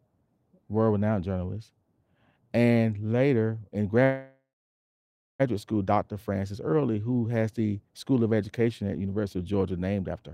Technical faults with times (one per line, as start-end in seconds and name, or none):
4.03-5.42 call audio freeze